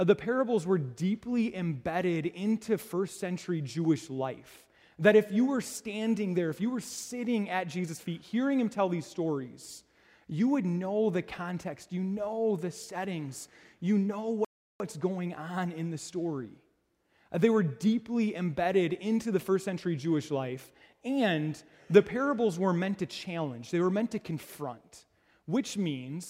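At 14.45 s the audio cuts out completely for about 0.35 s, resuming at 14.80 s. This is a playback stall, likely the player running out of buffered data or its thread being blocked. The waveform drops to a flat line, and the spectrogram shows a clean vertical gap across all frequencies.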